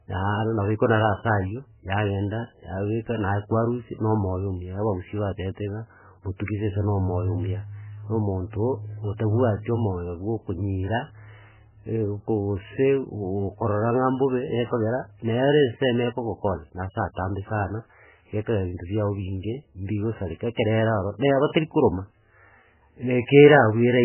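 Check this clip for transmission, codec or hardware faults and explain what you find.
There's one fault, running the whole way through: the speech has nothing above 3 kHz and a heavily watery, swirling texture, which points to MP3 compression, likely at a very low bitrate around 8 kbps. Starved of bits, the encoder chops the treble and flickers weak frequency lines on and off.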